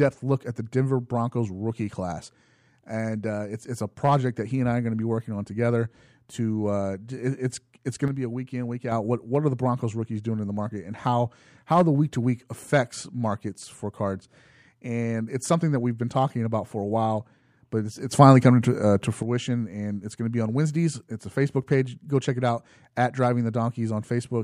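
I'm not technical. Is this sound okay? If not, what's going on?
No. A sudden gain jump, likely from a volume setting switched instantly rather than smoothly, makes speech and background noise drop quieter from 8.08 to 8.92 seconds, then much louder from 18.11 to 19.23 seconds.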